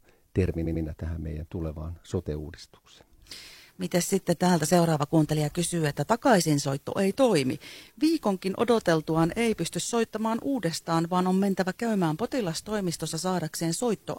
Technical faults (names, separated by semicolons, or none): repeated frames